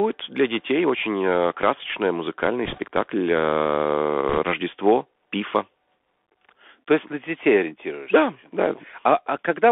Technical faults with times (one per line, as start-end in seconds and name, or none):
0.00-9.72 Bluetooth CVSD headset codec
2.65-2.80 bit errors on a Bluetooth voice link
4.29-4.38 bit errors on a Bluetooth voice link